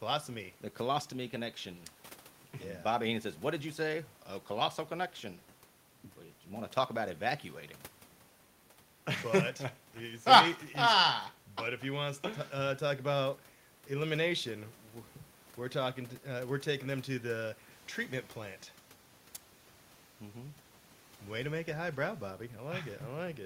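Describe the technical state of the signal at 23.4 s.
At 23.4 s the signal is intact, with only the room's own background noise sitting about 38 dB below the speech.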